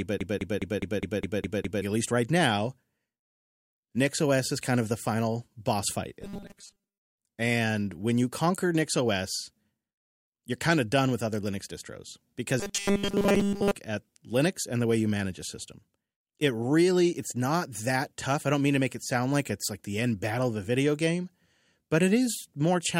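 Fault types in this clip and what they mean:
Broken-record loop, 0.00–1.82 s: from the very start a 206 ms fragment plays eight times, likely from a stalled stream, before "at least right now".
Robotic sound from repeated short buffers, 6.22–7.03 s and 12.60–13.75 s: a rigid metallic 200 Hz buzz, likely 5 ms buffers repeated over most of the audio.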